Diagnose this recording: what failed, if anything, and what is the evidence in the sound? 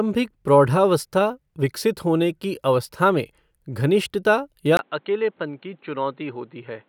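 The driver-level capture stage likely switched to a poorer input device mid-recording. At 4.77 s, after a 20 ms gap, the speech turns dull and boxy through to the end, with nothing above 4.2 kHz, about 5 dB lower level, and new background noise roughly 35 dB down.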